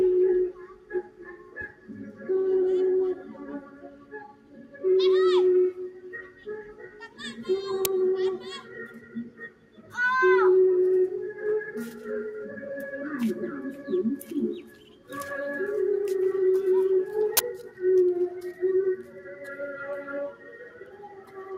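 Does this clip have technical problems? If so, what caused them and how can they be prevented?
Yes. A noise suppressor meant for speech was left running on these sounds for the whole clip. It treats steady tones, ambience and decaying tails as noise and pulls them down, so the level swings by around 10 dB. Onsets get through while sustained parts sink, giving a pumping, thinned quality. On a waveform the envelope breathes unevenly. On a spectrogram the steady bands and reverb tails fade in patches instead of decaying smoothly.

Several passages are cut harder by the noise suppressor, dropping by about 8 to 9 dB: 0.53–2.23 s, 3.18–4.84 s, 6.24–7.19 s, 8.62–9.94 s, 14.61–15.12 s, 17.65–17.81 s, 18.97–19.41 s, and from 20.32 s to the end. The waveform visibly narrows in these stretches. The spectrogram shows sustained energy dimming and tails truncated early, while sharp transients stay bright. 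Disabling speech noise suppression, or switching to a music or original-sound mode, prevents both of these suppressor effects.

Two uninitialised buffer bursts occur, one at 7.85 s and one at 17.37–17.39 s. In each, leftover memory was played as audio before real samples were written, producing a sudden loud crackle of digital noise. The first lasts about 5 ms, which fits a 256-sample buffer, and the second about 21 ms, which fits a 1024-sample buffer. On a waveform they appear as sudden spikes. A spectrogram shows bright vertical stripes spanning the whole frequency range, possibly with thin tonal lines. Zero-filling buffers before playback, or outputting silence when data isn't ready, prevents this.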